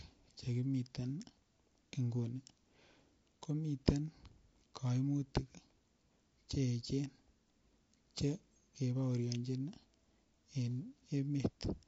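A speech clip with plainly audible low-delay AAC compression from start to finish, the likely cause being AAC-ELD at a rate that fits about 32 kbps. Its very short frames split the pitch harmonics poorly, so the voice sounds rough and grainy, with noise filling the gaps between harmonics. Unlike ordinary AAC at a similar rate, which smears time with pre-echo but keeps harmonics cleaner, the damage here sits in the harmonic structure itself.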